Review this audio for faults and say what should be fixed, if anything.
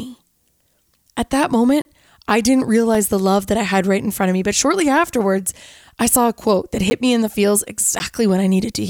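The speech drops out four times in blocks of digital silence: 1.82 to 1.85 s (30 ms, heard as a short hole), 2.95 s (3 ms, a tick), 6.9 s and 7.99 s (10 ms each, pops). Samples are replaced by zeros with no fade. The waveform shows flat near-silent stretches with abrupt edges, and the spectrogram shows thin blank columns bordered by broadband vertical lines. Ensure the output buffer is always filled on time and invalid values are caught before output.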